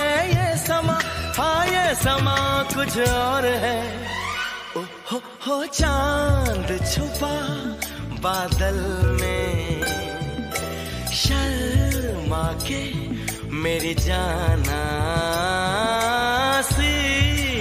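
No technical faults can be heard anywhere in the clip. There are no dropouts, gaps or other disturbances to place in time.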